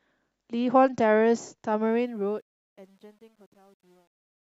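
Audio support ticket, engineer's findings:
Truncation distortion on fade-out, 1.84 s to end. Gritty tail, worst from 2.84 s. Undithered fade stage, fits 10-bit word length; quiet waveform collapses into steps.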